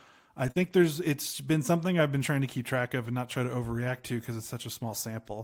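At 0.51 to 0.57 s, just before "there's it's been something", there is a short concealed packet loss. About 40 ms of audio did not arrive in time, so the decoder extended the preceding sound to fill the hole and then crossfaded back. It is heard as a brief smear.

Overlapping it, from 0.55 to 0.73 s, comes a lost packet rebuilt from error correction. About 100 ms, which fits five 20 ms packets, was replaced by low-bitrate redundant copies carried in the following packets. There is no gap, but that stretch sounds rougher and noisier than the audio around it.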